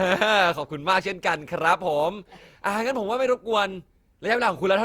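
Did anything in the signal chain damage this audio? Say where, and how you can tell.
Yes. Throughout the speech the sound is swirly, smeared and hollow, with blurred attacks, worse than a single 64 kbit/s Opus pass would give. This is likely generation loss at the codec stage: around seven successive encodes, each requantising on a shifted frame grid, stacking noise.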